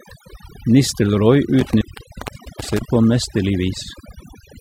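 Across the whole speech clip there is overdone noise removal. The noise reduction was set far too aggressively, so any frequency band sitting near the tool's noise estimate is pulled right down or gated off. Low-level parts of the speech fall below that threshold and are removed along with the noise. The result is a background of near silence dotted with twinkling, chirpy specks.

From 1.59 s to 2.82 s there is an intermittent contact, consistent with a loose plug or cable briefly breaking the signal path. Crackle marks the edges as the connection makes and breaks, and the line stays open for about 0.78 s in total. While it is open, the programme signal drops away and faint hiss remains.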